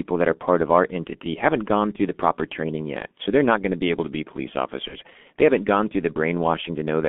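G.723.1 codec damage runs through the whole of this speech clip. The line passes only about 200 Hz to 3.5 kHz, and the coder rebuilds each 30 ms frame from a coarse, slowly updated voice model, leaving the speech muffled and hoarse with smeared consonants, heavy artefacts consistent with its roughly 6.3 kbit/s mode. VoIP packet loss concealed by the speech codec follows at 4.88 to 4.97 s, just after "able to be police". The decoder covers what sounds like one missing 30 ms frame by extending its last pitch and filter at falling gain, giving a brief, fading smear that lingers into the following frames.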